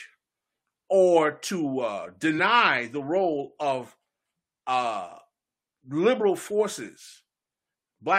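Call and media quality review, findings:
Compressed frames skipped, 2.38–2.43 s, between "or to uh" and "the role of". Speech jumps ahead by roughly 20 ms. Decoder or file lost whole frames. Unlike a packet dropout with concealment, there's no inserted silence or stretched filler. Audio is simply missing.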